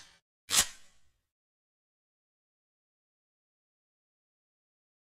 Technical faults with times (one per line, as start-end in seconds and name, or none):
0.79 dropped samples